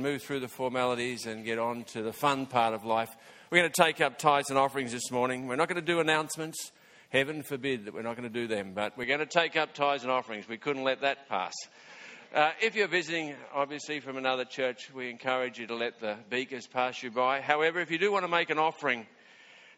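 Input switched to a poorer device at 9.04 s, lasting to the end: the audio likely moved to another microphone mid-recording. Everything above 7.6 kHz vanishes, so the sound turns duller with no gap, little level change, and only faint new background noise.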